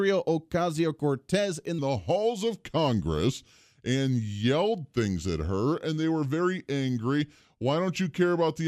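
From 1.79 s to the end of the speech, a section at the wrong speed takes over: playback drops to 0.865 times the original rate, so the voice slows and sinks by roughly three semitones, both changing together at that instant. The first 1.79 s run at normal pitch. This is likely a resampling or clock mismatch applied to the later portion, stretching it against its true timing.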